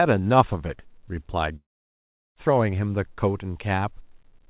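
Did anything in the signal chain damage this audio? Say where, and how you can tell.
Yes. A long network dropout from 1.56 to 2.39 s: the speech gives way to a brief fading buzz or hiss, then about 0.73 s of silence, and resumes with roughly 0.8 s missing. This likely reflects lost packets that the receiver's concealment could only briefly extend.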